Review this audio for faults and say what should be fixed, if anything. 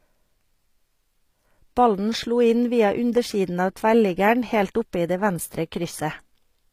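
Throughout, likely HE-AAC compression at what sounds like 24 kbps rebuilt the treble from copied lower bands, leaving gritty, metallic s sounds and nothing above 15.5 kHz. Encoding the speech at a higher bitrate with a full-band codec would prevent it.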